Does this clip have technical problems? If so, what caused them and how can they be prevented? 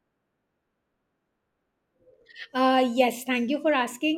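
No, nothing in this recording points to a technical fault, so there is nothing to trace or prevent.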